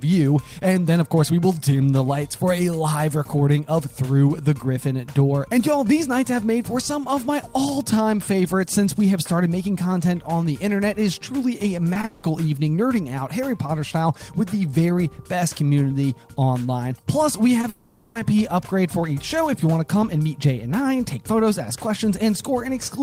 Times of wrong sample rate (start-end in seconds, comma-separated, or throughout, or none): none